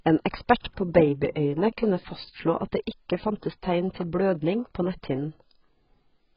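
Throughout, the speech is dull and smeared with nothing above 5.2 kHz, likely heavy AAC compression at a bitrate consistent with 12 kbps, discarding upper bands.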